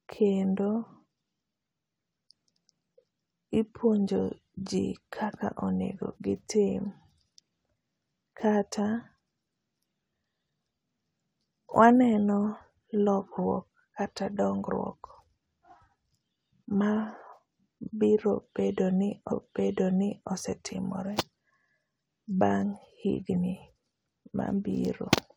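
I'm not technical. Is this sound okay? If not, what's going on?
No. At 19.31 seconds, just after "bedo ni", about one second of the speech plays a second time, through 20.31 seconds. This is a stream segment repeated: the player got the same chunk twice and jumped back, leaving a small blip.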